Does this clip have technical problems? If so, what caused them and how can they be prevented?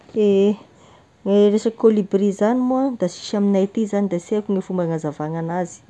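No, the signal shows no technical faults at any point, so there is nothing to trace to a cause or prevent.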